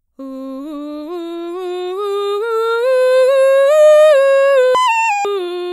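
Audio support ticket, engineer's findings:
Audio read two samples at a time (double speed), 4.75–5.25 s: reader taking sample pairs as single frames. Music plays twice as fast, an octave up.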